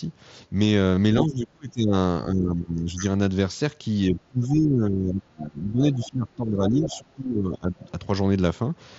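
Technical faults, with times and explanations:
0.95 to 0.97 s, concealed Bluetooth headset packet loss: roughly 20 ms of the headset's audio stream never reached the phone, a gap that fits a few lost frames. The receiver filled it by repeating the closest-matching stretch of the sound just before the gap. Because several frames were lost in a row, the patch is heard as a buzzy tone held at full level, with a small warble as the real signal resumes.
1.23 to 1.93 s, 2.25 to 3.03 s and 4.09 to 7.8 s, speech suppressed in double talk: the talker's level sinks and the sound turns dull and patchy, in places breaking up into pieces. The deepest dip is about 30 dB in the first stretch, about 15 dB in the second and about 20 dB in the long third one, which lasts roughly three seconds. The likely cause is both sides speaking at once, with the echo canceller unable to separate the local talker from loudspeaker echo and attenuating everything.
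5.94 to 6.09 s and 6.90 to 6.98 s, other side's voice leaking through: two brief scraps of a second voice surface about 20 dB below the main talker. This is likely loudspeaker playback of the far end reaching the microphone and surviving the echo canceller. These scraps fall inside the long suppressed stretch, where the canceller is already struggling.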